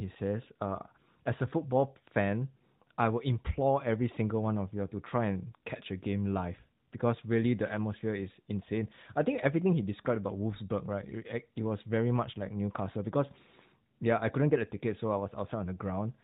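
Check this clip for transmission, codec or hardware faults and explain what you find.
Nothing here points to a transmission, codec or hardware fault; the speech comes through the narrowband mobile link as that path is meant to sound, with nothing going wrong along the way.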